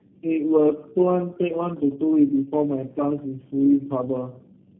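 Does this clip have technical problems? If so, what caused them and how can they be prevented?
Yes. Tandem speech coding runs through the whole clip: four speech coders in a row, each re-encoding the previous one's damaged output, stacking roughness, warble and muffling, with nothing above 3.6 kHz. Unlike a single low-bitrate codec, the artefacts compound. Prevent it with transcoder-free operation, passing coded frames end to end.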